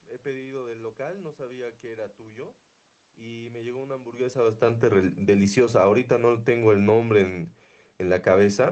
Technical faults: automatic gain falling

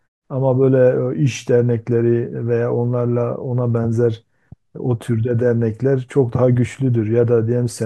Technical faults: none

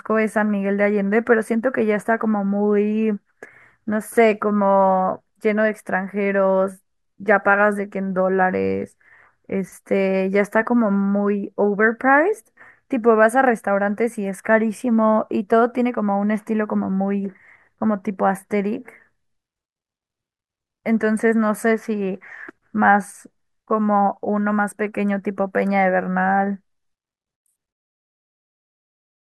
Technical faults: none

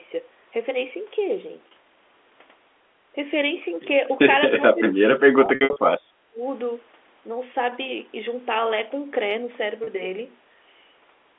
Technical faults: packet loss with pitch repetition; speech suppressed in double talk

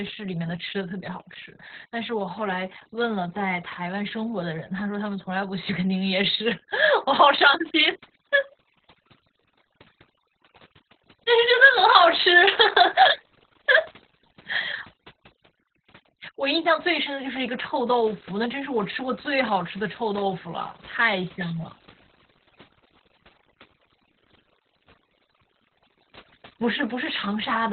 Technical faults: overdone noise removal; Opus voice compression

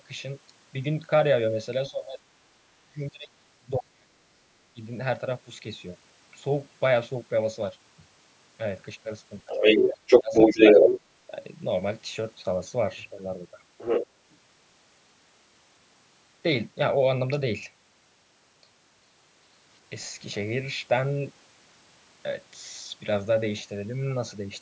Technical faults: speech suppressed in double talk; other side's voice leaking through

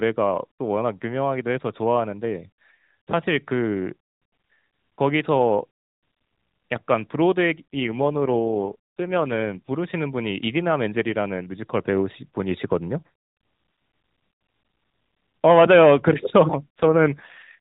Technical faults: AMR rate drop

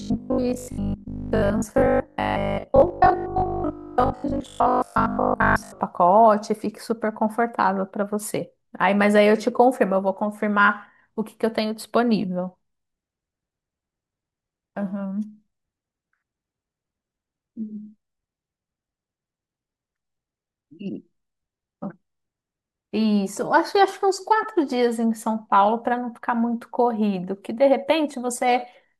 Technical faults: robotic sound from repeated short buffers

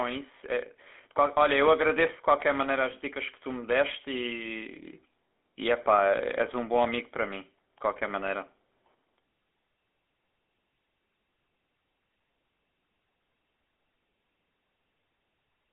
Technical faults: GSM full-rate codec

